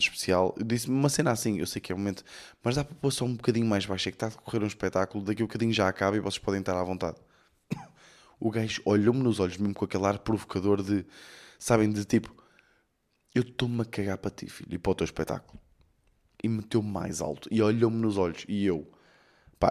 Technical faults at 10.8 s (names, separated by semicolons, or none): none